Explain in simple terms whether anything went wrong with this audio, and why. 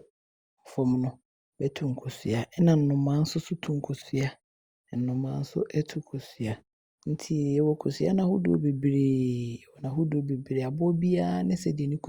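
Nothing went wrong with this speech clip, and the way the background goes quiet in the gaps between sentences is just the system muting the pauses as it's meant to, with none of the speech lost.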